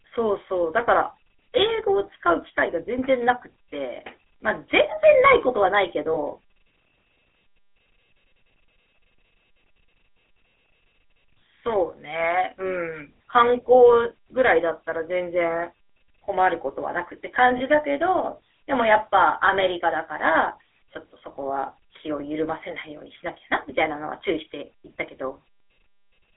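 The GSM full-rate codec colours the whole speech clip, with plainly audible damage. It models the vocal tract and drives it with a sparse, regularly spaced pulse excitation, giving a buzzy, gravelly roughness. The line band of 300 Hz to 3.4 kHz, and the character of the damage, fit a 13 kbps full-rate stream.

Lost GSM frames occur at 6.14 to 6.18 s and again at 17.58 to 17.61 s. Each fits a single missing frame, covering about 20 ms. The decoder repeats the last good frame's settings, so the sound briefly freezes into a rough, metallic ring before normal decoding resumes.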